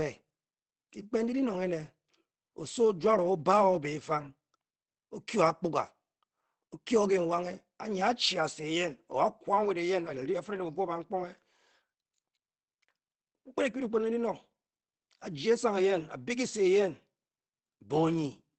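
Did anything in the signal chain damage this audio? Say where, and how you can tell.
Yes, at the codec stage throughout: the speech sounds muffled and hoarse, with nothing above 8.4 kHz. This is likely Opus compression running in its SILK speech mode at wideband, which fits a low bitrate around 16 kbps, where the encoder trims bandwidth and coarsens detail.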